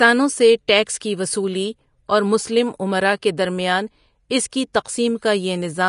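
Throughout, the speech sounds hissy and grainy, with blurred consonants, likely from Vorbis compression near 34 kbps; a spectrogram shows nothing above 10.6 kHz.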